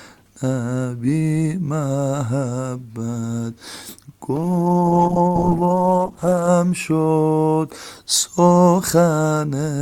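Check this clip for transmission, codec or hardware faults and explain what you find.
One fault stands out: a call bitrate drop between 4.36 and 6.55 s. The encoder is suddenly given far fewer bits and must code the sound much more coarsely. The sound turns rough and watery, and the top end thins out. The degradation is deepest for about 2.1 s. This fits the rate falling from around 64 kbps to roughly 11 kbps after the bandwidth estimate collapsed. Clarity returns once the bitrate recovers.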